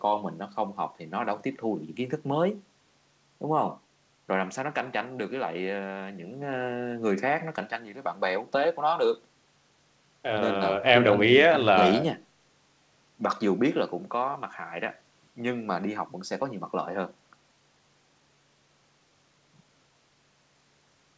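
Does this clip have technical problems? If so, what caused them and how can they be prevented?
No, there are no technical problems in this recording.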